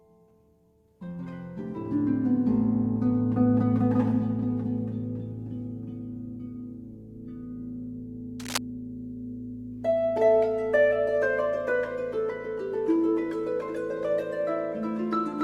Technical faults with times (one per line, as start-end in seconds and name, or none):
8.40-8.58 cable scratch noise